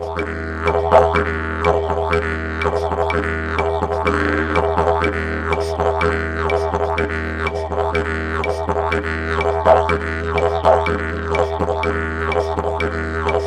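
No audible technical faults.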